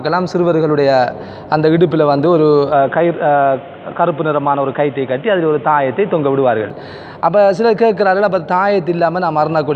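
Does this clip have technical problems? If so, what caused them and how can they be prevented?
Yes. The recording input was likely switched to a poorer device from 2.72 s to 6.70 s, with no gap at either changeover. The stand-in path cuts everything above 3.8 kHz, so the sound turns dull and boxy while its loudness stays about the same, and a faint new background noise sits well below the signal. At 6.70 s the full bandwidth returns abruptly. To prevent this, lock the input device and disable automatic switching to headset or fallback microphones before recording.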